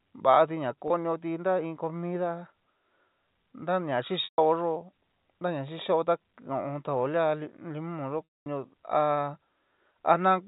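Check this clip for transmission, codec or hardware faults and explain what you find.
Packet loss with pitch repetition shows up three times in this speech, at 0.88–0.90 s, 4.24–4.38 s and 8.24–8.46 s, with gaps of 20, 140 and 220 ms. The receiver fills each missing stretch by looping the last pitch period and fading it out over about 50 ms. The 20 ms gap, which fits a single lost packet, sounds like a brief buzzy hold. The longer two decay into silence before the speech cross-fades back. The G.711 A-law telephone band underneath stays below 4 kHz.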